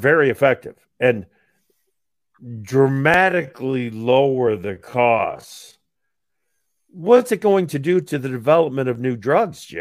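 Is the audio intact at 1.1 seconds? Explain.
Yes, the audio is intact at 1.1 seconds, with no audible fault at that moment.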